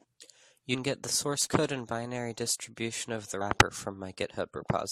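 Right at 0.73 to 0.75 s, just before "get the source", there's a quick blip from damaged data in the compressed stream. A bit of the encoded data got mangled, so the decoder couldn't make sense of those frames, lost its place and had to hunt for the next good frame header. You hear it as that short glitch rather than clean audio.

Then from about 1.42 to 1.58 s, between "get the source" and "and binary distribution of", there's loose connector crackle. A worn or dirty contact kept making and breaking for that sixth of a second, chopping the signal into rapid on-off bits. You hear it as an irregular scratchy burst.

The damaged compressed data shows up again at 3.40 s, right after "binary distribution of the". It's a shorter blip this time, where the decoder stumbled over bad frames and resynced.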